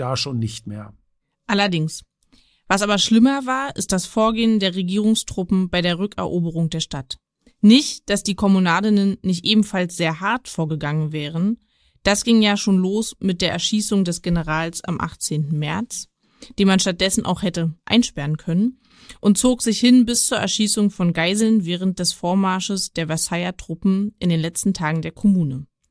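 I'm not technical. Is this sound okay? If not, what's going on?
Yes, it sounds fine: nothing stood out as a problem when listening to this recording.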